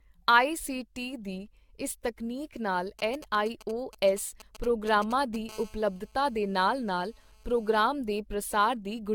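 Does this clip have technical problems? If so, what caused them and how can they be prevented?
Yes. The speech carries three distinct faults.

Generation loss runs through the whole clip. The sound is swirly and hollow, with smeared consonant attacks and a hard ceiling at 17 kHz. The likely cause is repeated lossy re-encoding, about seven passes, with the character pointing to AAC-LC at roughly 96 kbit/s. Each pass requantises on a shifted frame grid, so the damage accumulates. On a spectrogram this shows as a flat cutoff at 17 kHz, with patchy holes and smeared time-frequency blocks below it. To prevent it, keep a lossless master and encode to a lossy format only once, at the final step.

GSM signalling bursts start at 2.99 s, just after "ਦੀ ਇਸ ਤਕਨੀਕ ਨਾਲ", and continue to 5.51 s. A nearby 2G phone was exchanging short groups of radio bursts with the network, and the audio circuit rectified them. 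The result is a galloping dit-dit-dit of brief 217 Hz buzzes, sitting around 15 dB below the speech. On a spectrogram this appears as clustered vertical stripes with a harmonic comb spaced at 217 Hz. In the waveform it shows as rhythmic spiky packets. To prevent it, keep mobile phones well away from microphones, cables and interfaces, or switch them to flight mode.

GSM phone buzz follows directly, from 5.51 s to 7.80 s, when the phone moved into a call and transmitted in bursts 217 times per second. The rectified pulses give a steady, raspy 217 Hz buzz with dense harmonics, about 28 dB below the speech, and it has no relation to what is being said. On a spectrogram this is a continuous ladder of evenly spaced horizontal lines. The waveform shows a fine, regular pulse train beneath the speech. To prevent it, use shielded balanced cabling and keep transmitting phones away from the recording chain.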